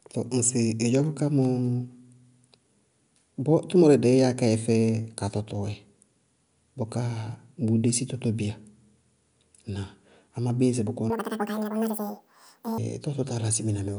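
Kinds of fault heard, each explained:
Wrong sample rate: from 11.10 to 12.78 s the speech suddenly runs at twice its proper speed and jumps a full octave, 12 semitones, in pitch, so it sounds chipmunk-high and rushed. Speed and pitch shift together because the samples are being played back faster than they were captured, with no rate conversion in between. A doubling like this fits audio recorded at about 22 kHz being played out at 44.1 kHz.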